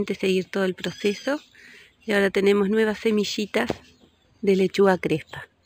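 Throughout, imaging from linear upsampling: straight-line interpolation, which points to an 11 kHz source, leaves faint mirrored spectra around 5.5–11 kHz, heard as metallic shimmer.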